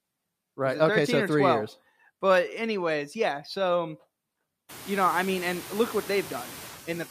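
A noise suppressor works on this speech recording throughout, pulling down by about 17 dB the bands it judges to be steady noise. The result is noise suppressor artifacts: the background dips between phrases and swells back under the voice. This is most noticeable after the room noise climbs by about 24 dB at around 4.5 s to sit only about 19 dB below the speech.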